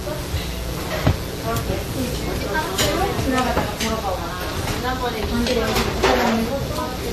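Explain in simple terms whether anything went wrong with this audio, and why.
A steady, raspy mains buzz sits under the sound from start to finish, and it's fairly loud. It comes from 60 Hz power leaking into the recording chain, with sharp switching spikes twice per cycle that spread harmonics up into the kilohertz range.

The audio also has two layers of compression artefacts at once, and everything above about 15.2 kHz is gone. That points to transcoding between lossy codecs, likely WMA first and then MP3, with the second codec piling its own damage on top of the first.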